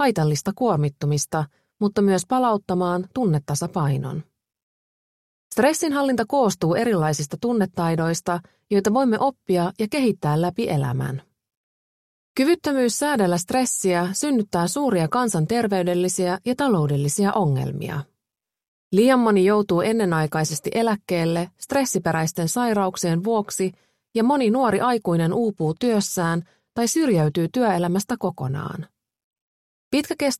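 From 25.48 to 27.36 s the treble dulls and a gritty grain rises under the sound, then clears. This is a Bluetooth SBC bit pool drop: a congested link forced coarser coding, consistent with the bit pool falling from 31 to 15, starving the upper sub-bands.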